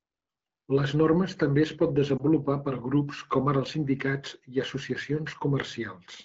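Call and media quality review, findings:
Lost AMR speech frames, 2.17–2.24 s: brief dip or warble, consistent with a single corrupted 20 ms frame concealed by AMR-WB reusing prior pitch and vocal-tract parameters at reduced gain.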